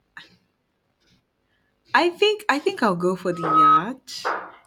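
Just after "go for", at 3.31 s, a steady tone near 1.3 kHz rises out of the speech, swells over roughly a third of a second, and sits around 10 dB above the voice until it stops at 3.84 s. This is loudspeaker feedback squeal. The microphone is picking up the loudspeaker it drives, and at that one frequency the loop gain exceeded unity, so the tone kept reinforcing itself until it stopped.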